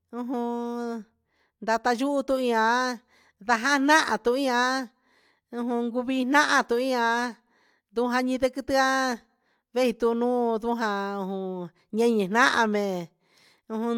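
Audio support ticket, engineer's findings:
No technical faults found in the speech signal; the audio path shows nothing that needs attention.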